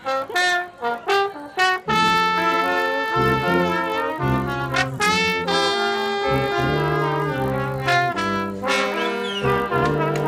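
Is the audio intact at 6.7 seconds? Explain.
No. At 6.7 s, as throughout the clip, the resampler restarted on every block. Each 20 ms block, apparently converted from 24 kHz to 48 kHz, was processed alone, leaving an error at every edge. This produces a 50 Hz buzz that sounds only under signal.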